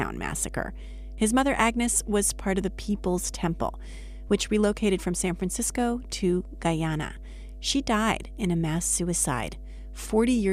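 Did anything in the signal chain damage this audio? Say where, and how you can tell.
Yes. Mains hum runs throughout this speech at 50 Hz, about 15 dB below the signal, a steady tone from a ground loop or a nearby transformer in the analogue wiring, unlike buzzier, harmonic-rich interference.

An overlap between stream segments at 4.29 s leaves a tiny skip just before "which relocated from", where the player trimmed overlapping segment time stamps. The skip's brevity, rather than silence, separates it from packet loss.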